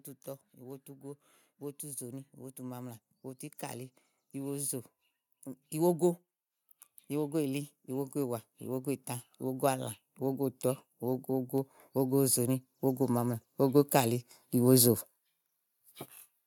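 Automatic gain rising from 0.55 to 3.05 s lifts this speech clip by about 4 dB, then again from 7.08 to 14.95 s by about 13 dB: the gain control judged the input too quiet and slowly raised its gain, so voice and background swell together.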